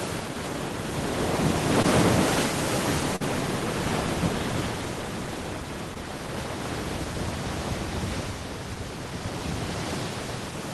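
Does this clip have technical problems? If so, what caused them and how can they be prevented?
Yes. Three short concealed packet losses occur, at 1.82–1.86 s, 3.16–3.22 s and 5.94–5.97 s, where about 20 ms, 40 ms and 20 ms of audio arrived too late to decode. The receiver covered each gap by extending the preceding sound and then crossfading back into the real signal. This produces a brief smear or wobble, with the 3.16 s event the longest. A codec artefact would persist throughout instead. A larger jitter buffer, forward error correction and a steadier network connection would prevent these dropouts. The call path itself, consistent with Opus at a modest bitrate with content limited to about 12 kHz, is working normally.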